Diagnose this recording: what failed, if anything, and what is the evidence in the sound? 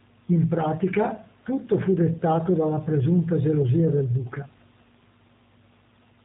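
Throughout, the speech sounds rough, faintly synthetic and capped at 4 kHz: G.729 codec damage, rebuilt from sparse pulses per frame, which fits an 8 kbit/s stream.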